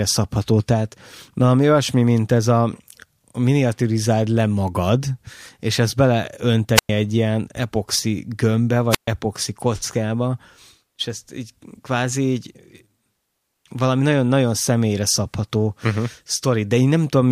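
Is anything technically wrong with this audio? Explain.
Yes. Wireless microphone squelch dropout occurs at 6.75–6.89 s, before "egy ilyen epoxi gömbbe", and at 8.90–9.08 s, before "kockába és ezt így". The fading radio signal trips the receiver's squelch, muting about 103 ms and 128 ms. A hiss rise before each hole distinguishes it from a digital dropout.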